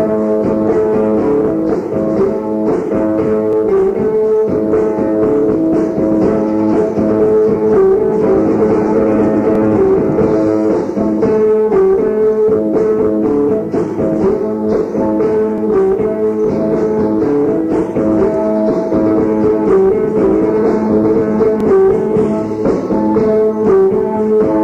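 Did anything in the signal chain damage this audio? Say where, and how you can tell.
Yes: overlapping chunks at 3.53, 9.55, 15.58 and 21.60 s, each lasting about 25 ms. Every 6 s a 25 ms slice plays twice, giving a regular stutter. The buffer or block-processing stage began each chunk before the previous one ended.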